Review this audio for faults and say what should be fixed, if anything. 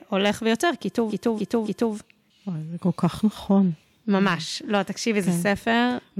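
Hard clipping at 0.16–0.65 s, 4.15–4.34 s and 4.75–5.83 s: speech peaks overdrive a stage by about 3, 5 and 2 dB, are cut flat, and crackle with added high harmonics. Prevent it by lowering gain before the converter so peaks keep headroom.

Repeated frames at 1.09–1.93 s: a 0.28 s block of compressed audio plays three extra times, stuttering and adding about 0.84 s. Prevent it by fixing the encoder or transport so each frame is written and sent once.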